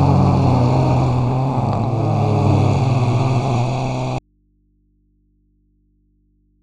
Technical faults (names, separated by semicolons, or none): audio dropout to a faint residue